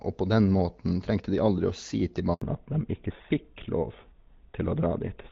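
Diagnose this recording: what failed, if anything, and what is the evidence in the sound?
A handover gap in the network path cuts the speech at 2.34 s, and nothing returns until 2.42 s, about 80 ms later. The call was passed from one network to another, and no speech frames arrived during the switch, so the decoder had nothing to play. On a waveform the signal tapers away quickly to a flat line. On a spectrogram every frequency band drops out together in a narrow vertical gap, and whatever was said in that span is gone.

From 2.42 s to the end, a fallback to narrowband at the codec stage removes everything above 4 kHz. Before the gap, the wideband HD Voice codec carries clear speech with light coding damage, and the upper band is audible. Afterwards the sound turns dull and rougher, which points to an older narrowband codec of the GSM full-rate kind. On a spectrogram the energy above 4 kHz stops abruptly at 2.42 s, leaving a hard flat ceiling.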